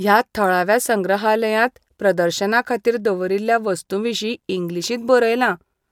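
No technical faults are audible anywhere here.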